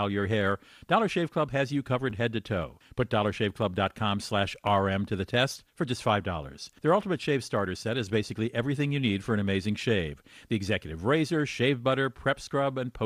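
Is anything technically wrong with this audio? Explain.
Yes, there are two repeated-buffer stutters. At 2.10 to 2.12 s, between "has you" and "head to toe", a tiny slice of speech plays three times in a row. At 4.67 s, just before "to the test for", a slice doubles once. Fresh audio arrived late, so the device replayed its last block, whose length fits a 10 ms buffer. Each hard join gives a brief buzzy click. Unlike a dropout, there is no silent gap, and the speech that follows appears intact.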